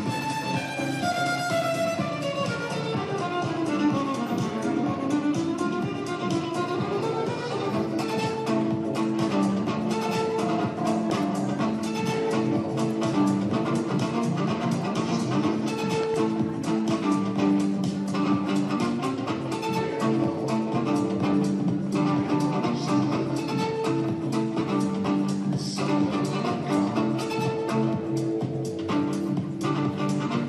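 Loud pops sit on top of the audio at 11.10–11.12 s and, as a quick double pop, at 16.03–16.16 s, roughly 10 dB above it. A likely cause is an electrical glitch.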